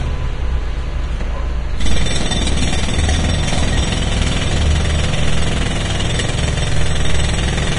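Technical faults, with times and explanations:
Throughout, Vorbis compression: nothing survives above about 10.6 kHz, and the treble below that cut-off turns hissy and grainy, with roughened tones and smeared attacks. This is likely heavy Vorbis coding, consistent with a bitrate near 31 kbps, where fine high-band detail is replaced by noise of similar energy. A plain low-pass filter would only dull the top, and MP3 at this rate would sound more warbly than noisy.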